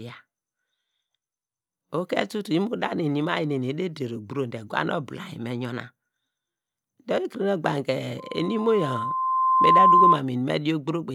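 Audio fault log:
8.18 to 10.22 s, loudspeaker feedback squeal: a steady 1 kHz tone rises out of the speech over about a second and a half and settles roughly 10 dB above it. The microphone is picking up its own loudspeaker, and at that frequency the loop gain exceeds one.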